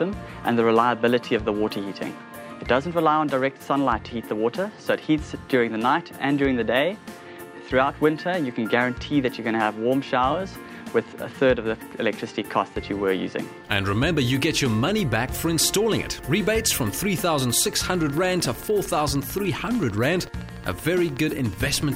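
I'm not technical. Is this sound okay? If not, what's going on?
No. A train of clicks runs from about 17.43 to 21.91 seconds, to the end of the recording. It's a steady ticking, roughly 13 clicks every second, about seventy in all, each sounding much the same and evenly spaced. The clicks ride on top of the sound and stand out above it. The likely cause is electrical interference from nearby equipment or a faulty connection or power supply injecting a short pulse into the recording again and again.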